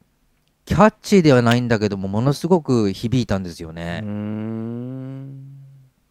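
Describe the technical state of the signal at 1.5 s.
Right at 1.51 s there's an electrical switching spike sitting on top of the speech, a sharp snap lasting just under a hundredth of a second and peaking not far below full scale. The likely culprit is something nearby, like a switch, a motor or a bit of static discharge, arcing briefly and getting picked up by the audio line as a tight burst of clicks layered over the sound.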